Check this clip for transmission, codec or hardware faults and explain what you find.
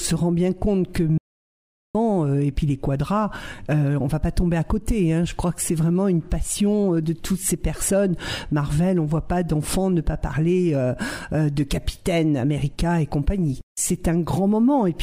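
One fault: from 1.18 to 1.95 s the audio drops out to silence for about 0.77 s, likely a lost input writing silence. Unlike a gate or fade, it cuts abruptly to total silence with no room tone.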